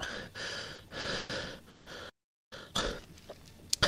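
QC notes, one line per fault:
0.75–1.31 s, repeated stalls (stutter): packets arrived late four times, so the receiver stretched the sound to fill 200 ms, longest gap 110 ms. The sound drags and stutters.
1.69–1.88 s, call audio freeze: packets were likely held up, emptying the jitter buffer. The sound is continued as a fading 170 ms fill, then resumes where it stopped, nothing lost.
2.09–2.53 s, playback stall: the player likely ran out of data or was blocked. The output drops out for about 0.42 s mid-flow before going on.
2.53–2.93 s, time-compressed catch-up: the player cut and cross-faded small pieces to clear its backlog, running at 2x speed. The sound is hurried at normal pitch.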